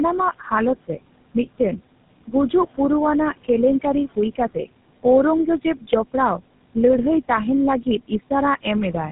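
Speech runs through a noise suppressor for the whole of the clip, lowering the steady room noise, which sits about 18 dB below the voice, by about 18 dB between phrases. On a spectrogram this shows as a noise floor that drops out in pauses and reappears patchily beneath voiced stretches. Tandem speech coding is also audible throughout. The voice has the layered roughness and muffling of two low-rate speech codecs in a row, which fits an 8 kbit/s CELP coder followed by GSM full rate with a G.711 link between them. Each coder re-encodes the damage left by the one before it. A spectrogram would show nothing above 3.8 kHz and smeared, blotchy harmonics.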